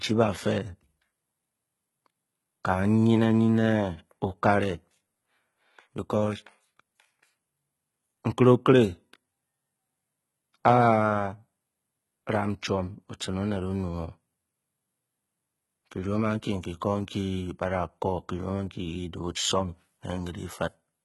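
Throughout the clip the treble sounds bright but synthetic, with s sounds turning gritty and lispy and nothing audible above 11.8 kHz. This likely comes from heavy HE-AAC compression around 16 kbps, where the upper band is rebuilt by copying lower bands upward, so harmonics no longer line up.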